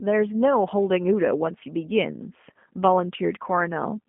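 From start to finish, the speech carries G.729 codec damage, and it is plainly audible. The codec models each short frame with a vocal tract filter, a pitch predictor and a few pulses, and then rebuilds the sound. Here the band runs only from about 150 Hz to 3.4 kHz, so there is no air or low body. Voiced sounds turn rough and slightly synthetic. The character fits an 8 kbit/s G.729A stream.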